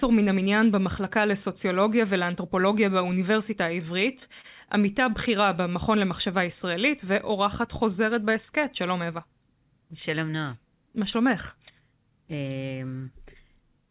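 At 4.41 to 4.46 s, a short stall from a late packet: the jitter buffer ran empty, so the receiver stretched the last sound for 27 ms, then resumed from the same point. Unlike a dropout, nothing is lost; the sound merely lingers, and everything afterwards arrives 27 ms later.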